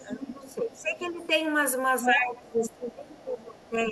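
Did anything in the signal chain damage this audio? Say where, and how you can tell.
Yes. A second voice leaks through at 0.0–0.53 s, 0.74–0.82 s, 1.02–1.27 s, 2.03–2.14 s and 2.42–2.69 s. It ranges from about 35 dB below the speech to roughly equal level at 2.03 s. This is other side's voice leaking through, likely residual loudspeaker echo that the call-processing echo canceller failed to remove.

The main speech also sinks by roughly 15 dB from 0.03 to 1.24 s and by roughly 20 dB from 2.03 s to the end, both times while the far side was playing. This is speech suppressed in double talk: the canceller likely attenuated everything because it couldn't separate talker from echo.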